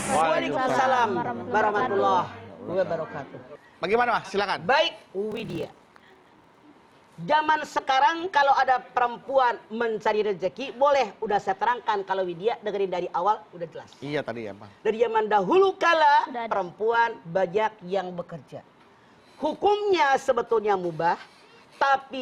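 Block size mismatch (padded) from 5.29 to 6.63 s: each block written is shorter than the block read next, and the rest is filled with zeros, which fits 1024-sample writes. The gaps make a buzz at 38.3 Hz, and the sound plays at 0.889 speed.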